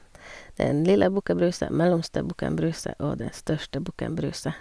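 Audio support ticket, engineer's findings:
No faults found in this recording.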